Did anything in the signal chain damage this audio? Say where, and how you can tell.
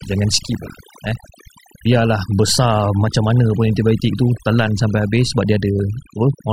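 Yes, overdone noise removal at the processing stage, throughout. Pauses sit near silence with twinkling specks. Quiet voice bands near the noise floor vanish.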